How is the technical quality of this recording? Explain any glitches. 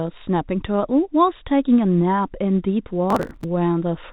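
The recording has one glitch. It also passed through a phone-band call path whose G.711 mu-law coding leaves nothing above 4 kHz.

From 3.10 to 3.44 s there is processor overload crackle. The processor repeatedly missed its buffer deadlines, dozens of times over that stretch. Each late chunk, spaced at around 5 ms, was simply skipped, leaving abrupt joins heard as gritty tearing. A waveform shows jagged, chopped segments with hard edges. A spectrogram shows dense vertical click lines spanning the band.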